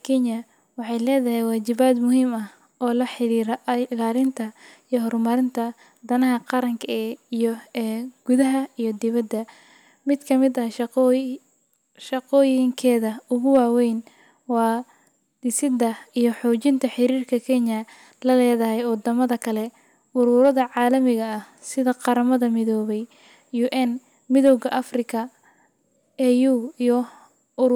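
It's a speech clip with three brief bursts of hard clipping, at 13.55 to 13.59 s, 20.42 to 20.49 s and 24.46 to 24.53 s. On those loud moments the level runs past what the signal path can carry, by about 2 dB, about 1 dB and about 2 dB respectively, so the peaks get sliced flat. Those squared-off tops throw extra high harmonics into the spectrum, which you hear as a quick crackle on each peak.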